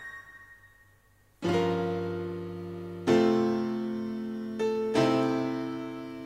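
Sample clock jitter runs throughout: the converter clock wanders by a few microseconds, adding roughness about 40 dB below the music, strongest on loud, bright passages.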